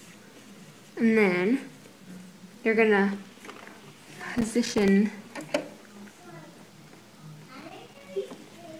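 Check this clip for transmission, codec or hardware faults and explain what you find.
There's a hardware fault here: loose connector crackle, turning up twice, from 4.38 to 4.88 s and again from 7.60 to 8.09 s, each burst about half a second long. A worn or dirty contact somewhere in the chain is flickering between touching and not touching, so the signal gets chopped on and off in quick, uneven bursts, with any DC on the line adding little pops. You hear it as a ragged scratchy crackle over the audio.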